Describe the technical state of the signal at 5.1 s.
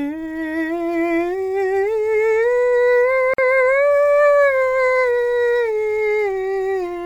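At 5.1 s the music plays through intact, with no audible fault in the signal at that moment.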